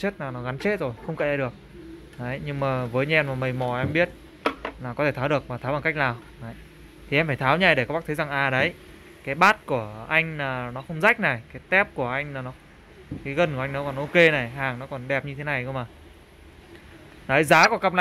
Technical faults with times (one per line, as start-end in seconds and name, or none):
9.42-9.51 hard clipping
11.06-11.09 hard clipping
14.19-14.27 hard clipping
17.52-18.01 hard clipping
17.63-17.66 corrupt frame decoded